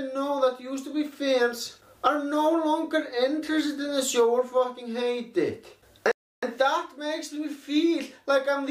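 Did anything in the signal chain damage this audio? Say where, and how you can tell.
Yes. There is a playback stall from 6.11 s to 6.43 s: the sound cuts off mid-flow and the output stays silent for about 0.31 s before carrying on. The gap is silence rather than a fade or dropout noise, which points to the playback stage rather than the recording. The likely cause is the player's buffer running dry, or its output thread being blocked, so nothing reached the device until it recovered.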